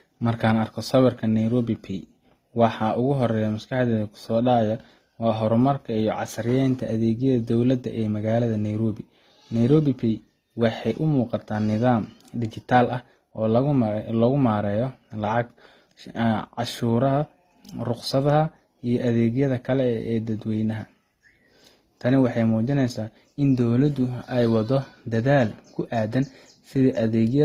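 All the way through, nothing sits above 15.8 kHz and two different sets of codec artefacts overlap, likely from transcoding between lossy codecs.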